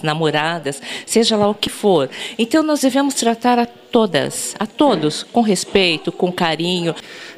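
The recording was likely captured in 2-second chunks, with a sliver of roughly 20 ms dropped at each handover, so audio goes missing between chunks at 1.67, 3.65 and 5.63 s, each heard as a brief, regularly spaced skip where the sound jumps abruptly forward.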